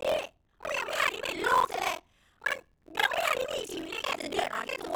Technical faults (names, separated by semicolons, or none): buffer tearing